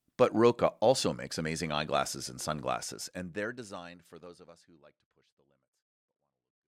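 Nothing stood out on listening to this speech; it eases away in a smooth, editor-style fade over roughly its last four seconds.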